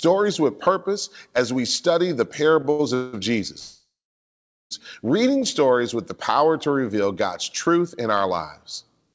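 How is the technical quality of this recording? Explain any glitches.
The recording has three timing glitches in the speech: a short stall and two freezes. All three add time to the audio rather than removing any. The sound has no content above 8 kHz, which fits a wideband call codec such as 64 kbps G.722 on a normal call path.

At 2.71 to 2.81 s, just after "as we study the", there is a short stall from a late packet. A packet arrived late and the jitter buffer ran dry. The receiver stretched the last sound for about 74 ms, then resumed from the same point. You hear a syllable held too long. On a waveform this shows as a run of near-identical repeated cycles. A spectrogram shows flat, smeared horizontal bands.

Two call audio freezes follow, most likely from packets held up in the network. The first runs from 2.95 to 3.15 s. It fills 182 ms with a buzzy continuation of the last sound that fades but never reaches silence. 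The second runs from 3.59 to 4.73 s, just before "reading stories with the". The buzz decays, and about 810 ms of it is plain silence. A spectrogram shows fading, stretched bands and then a blank column. The waveform collapses to a flat line.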